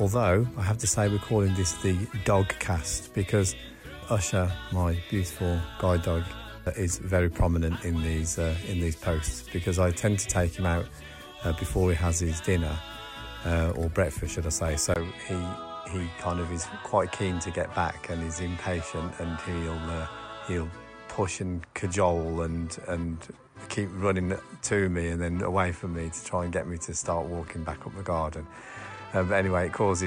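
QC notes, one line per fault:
14.94 s to the end: input switched to a poorer device, likely. After a 20 ms gap the sound drops a bit in level, loses everything above 9.7 kHz, and picks up a new, faint background hiss, so it goes duller and stays that way.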